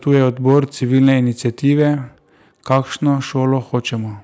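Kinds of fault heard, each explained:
Hard clipping: the speech peaks overdrive the chain by about 2 to 5 dB, so their tops are sliced flat and crackle in four bursts: 0.11 to 0.60 s, 0.95 to 1.18 s, 1.67 to 1.87 s and 2.70 to 3.10 s, the last being strongest. A waveform shows flat plateaus on the peaks. A spectrogram shows added harmonic energy smeared upward during each burst.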